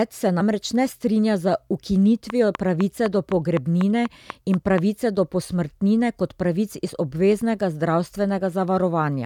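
At 0.40 s, just before "ne strinja z", compressed frames are skipped: about three 24 ms frames, roughly 70 ms of speech, vanish, leaving a visible jump in the waveform.

From 2.3 to 4.79 s, ending before "do posmrtnine kot pravic", a train of clicks ticks about four times per second, regularly spaced. About ten similar spikes rise roughly 10 dB above the speech, showing as thin vertical lines on a spectrogram. The likely cause is electrical interference.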